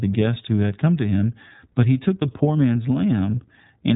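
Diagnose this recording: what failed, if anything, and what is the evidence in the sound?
Codec stage: the iLBC codec runs throughout. Nothing passes above 3.8 kHz, and the speech sounds rough and synthetic from 30 ms frames coded independently, fitting 13.33 kbps.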